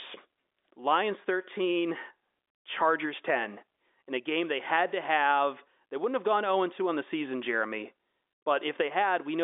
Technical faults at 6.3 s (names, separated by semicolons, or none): none